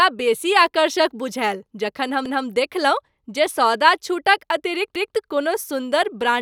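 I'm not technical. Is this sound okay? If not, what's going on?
No. Overlapping chunks occur at 2.26 to 2.46 s and again at 4.96 to 5.16 s. The speech was handled in 2.5-second pieces, and each new piece started 200 milliseconds before the previous one finished, so that short stretch plays twice, causing a stutter.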